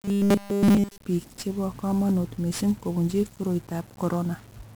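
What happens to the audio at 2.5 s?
At 2.5 s the speech sounds fuzzy and crackly, with its treble buried under broadband hiss, as it does for the whole clip. This is heavy 1-bit DFPWM compression: each sample keeps a single bit nudging an adaptive level, a coarse scheme that fits roughly 48 kbps.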